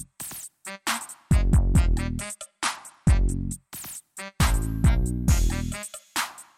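From 2.19 to 3.53 s the treble dulls and a gritty, grainy noise rises, then clears. This is a Bluetooth SBC bit pool drop: a congested link starved the top sub-bands and coarsened the rest, consistent with the bit pool falling from 31 to about 13, near 94 kbps.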